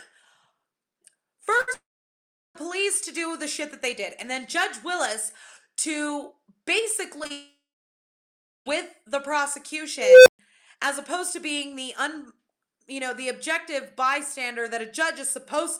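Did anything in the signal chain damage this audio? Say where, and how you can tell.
Yes. At the network stage, short concealed packet loss occurs at 1.57 s, 7.19 s, 7.24 s and 7.27 s. Each time about 20 ms of audio failed to reach the decoder, and it was patched by extending the preceding sound for 10 to 30 ms, heard as a brief smear or wobble.

Directly after the first of these, a burst of packet loss runs from 1.61 to 1.69 s. About 60 ms went missing and the receiver carried the last sound forward while fading it, giving a short buzz or hiss before the audio resumes further on.

Two long network dropouts are the likely cause of the longest gaps, from 1.73 to 2.57 s and from 7.32 to 8.68 s. The continued sound fades into silence lasting about 0.73 s and then about 1.03 s, and the audio returns without the missing 0.82 s and 1.34 s.

In the processing chain, an unstable filter runs from 9.99 to 10.39 s. 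A recursive filter with bad coefficients let a tone around 500 Hz grow for 0.27 s into clipping until its output overflowed, and the sound cuts out for 0.13 s before the filter resets.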